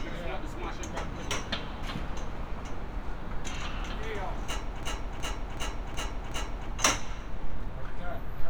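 From 4.83 s to 6.69 s, a system hang loop repeats one 372 ms piece of sound five times, a stutter at about 2.7 Hz, which fits a 16384-sample ring buffer. On a spectrogram or waveform, identical blocks repeat every 0.37 s.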